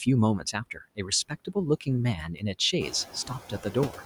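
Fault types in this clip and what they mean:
Noise suppressor artifacts: The suppressor checks each frequency band frame by frame and turns down whatever it takes for steady noise, here by about 14 dB. The background sinks in pauses and climbs back under the speech.
Speech cut by the noise suppressor: Parts of the speech were taken for noise and lowered with the background. This happens at 0.4–0.55 s, 0.74–1.11 s, 1.29–1.56 s and 3.51–3.95 s, with drops of about 13, 17, 13 and 8 dB. Roughly a tenth of a second in each sounds swallowed or faint.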